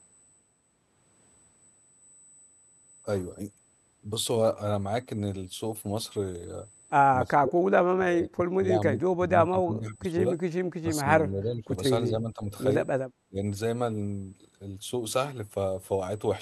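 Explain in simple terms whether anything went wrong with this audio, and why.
The speaker's voice sinks or breaks up at 7.25 to 7.65, 7.91 to 9.31, 9.48 to 10.18, 10.81 to 11.74, 12.09 to 12.51 and 13.28 to 13.41 seconds. This is likely speech suppressed in double talk. Both sides spoke at once, and the echo canceller turned this voice down too.

Around 10.5 seconds, the room sound briefly drops away and then returns. This is background gated by the echo canceller. While the loudspeaker was playing, the canceller pulled the microphone down hard for a moment, then let go.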